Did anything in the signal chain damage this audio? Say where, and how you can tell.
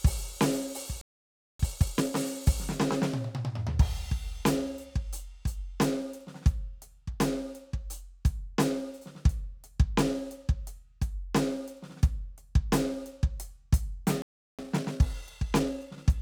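Yes. Playback stall, 1.01 to 1.59 s (about 0.58 s) and 14.22 to 14.59 s (about 0.37 s): the music drops to silence mid-flow, then resumes. At the playback/buffer stage, the player was likely starved of data or its thread blocked.

Time-compressed catch-up, 1.59 to 2.17 s at 2x speed and 14.59 to 16.05 s at 1.25x: the music rushes at unchanged pitch. The player is discarding short slices and cross-fading the joins to drain the backlog from each stall.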